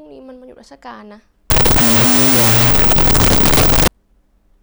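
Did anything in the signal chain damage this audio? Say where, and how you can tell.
Yes. The damage sits in the sample-format conversion stage, from 1.50 to 3.88 s. There the speech collapses into loud, harsh noise. The original is still faintly audible underneath, slowed to half speed and dropped an octave. That combination is the signature of a wrong sample width. It points to 16-bit integer data being read as unsigned 8-bit. Each byte becomes its own sample, doubling the count. Low bytes turn into noise, and only the high bytes carry the real signal.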